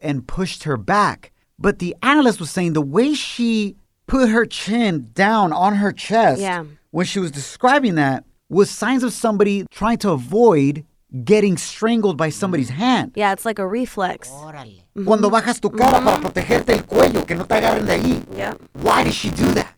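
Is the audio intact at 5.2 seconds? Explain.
Yes, at 5.2 seconds the audio is intact, with no dropout, click, distortion or other audible fault at that moment.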